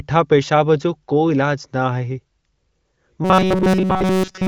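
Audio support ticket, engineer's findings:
Robotic sound from repeated short buffers, 3.25 s to end of clip. Likely cause: audio starved, playback looping the last ~5 ms block. Imposes a fixed 188 Hz metallic buzz over the speech. Preceding AMR-WB (HD Voice) band-limited audio sounds clean, no or only faint codec damage.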